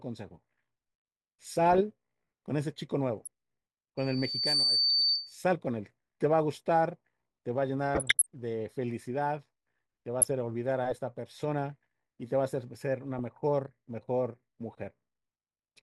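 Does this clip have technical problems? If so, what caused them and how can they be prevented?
Yes. DAB burbling breaks through the speech at 1.47 to 1.81 s, 3.22 to 3.27 s, 4.90 to 5.16 s, 7.95 to 8.26 s, 10.18 to 10.33 s and 13.19 to 13.37 s. Weak reception let a bit error rate of well under one percent slip past error correction, corrupting sub-band levels for single frames. Better antenna placement or a stronger multiplex signal prevents it.

A loudspeaker feedback squeal at 4.6 kHz swells over less than a second from 3.97 s and rings until 5.39 s, ending a few decibels above the speech. The microphone picked up its own loudspeaker, and loop gain exceeded one at that frequency. Lowering gain, repositioning the microphone away from the speaker, or notching 4.6 kHz prevents it.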